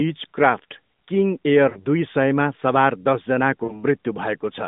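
Corrupted radio frames failed their checksum twice, and the AMR decoder concealed each gap by repeating its last good pitch and vocal tract settings at falling gain. These are lost AMR speech frames. From 1.70 to 1.86 s, just before "दुई सयमा सवार", and again from 3.64 to 3.83 s, the narrowband speech smears into a drawn-out, fading buzz. Each gap is about 60 ms, which fits three 20 ms frames, before the voice returns briefly weak.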